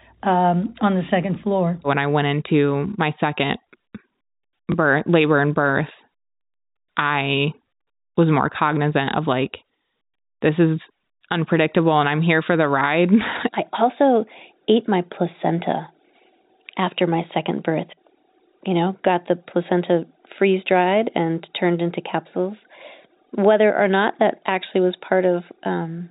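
Speech, with a single instance of packet loss with last packet repeated at 4.72 to 4.74 s, just before "labor and birth". For 20 ms the preceding stretch of audio plays again, which fits one lost 20 ms packet being filled by repetition. The single repeat sounds like a small blip rather than the clean silent gap of a plain dropout. The G.711 coding passes nothing above 4 kHz throughout.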